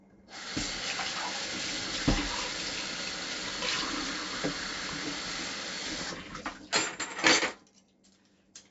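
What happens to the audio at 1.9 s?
4-bit ADPCM compression is present at 1.9 s, as it is for the whole clip rather than as an isolated event. Each sample is coded as a coarse 4-bit step away from a predicted value, with the step size adapting as the sound changes. The damage here is heavy: a gritty hiss rides on the louder sound and rises and falls with its level, and sharp attacks distort when the step cannot grow fast enough. Nothing is audible above about 7.7 kHz, which leaves the sound dull and fits a 16 kHz sample rate and a 64 kbps stream.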